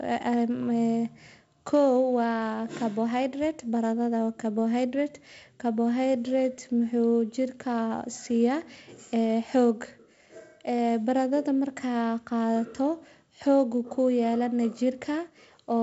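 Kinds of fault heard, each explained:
Nothing here counts as a fault: the speech comes through wideband telephone coding in the usual G.722 way, with content reaching up to about 7.7 kHz and only the light coding hiss you'd expect from that path.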